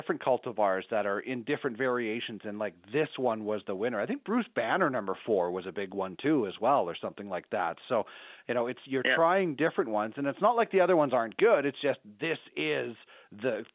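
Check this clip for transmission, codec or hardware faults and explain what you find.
No transmission, codec or hardware faults are audible.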